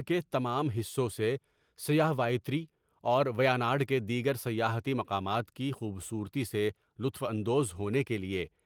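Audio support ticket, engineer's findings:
No findings: nothing in the speech calls for action, and the Opus voice compression path sounds as expected.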